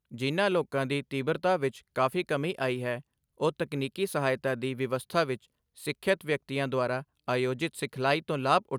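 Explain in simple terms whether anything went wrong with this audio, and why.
Nothing stood out on listening to this speech recording: at no point did the sound falter, break up or change in a way that would point to a technical problem.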